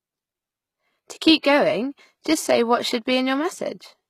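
From the start, the speech has treble that sounds gritty and metallic, with s sounds turning lispy and nothing above 14.9 kHz. This is likely HE-AAC compression at a low bitrate, around 20 kbps. The codec carries only the lower spectrum properly and synthesises the top by copying lower bands upward under a coarse envelope, so the rebuilt harmonics don't line up with the real ones. The damage is plainly audible throughout.

From 1.39 to 1.44 s, just before "going just say what", a short hiss rises about 53 ms ahead of the attack, and the onset sounds softened and smeared. This is pre-echo. The transform block containing that sharp attack had its quantisation noise sized for the loud part and spread across the whole block, so the noise also fills the quiet stretch that comes before the attack.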